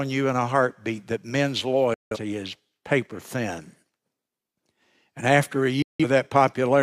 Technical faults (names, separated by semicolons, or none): digital broadcast dropout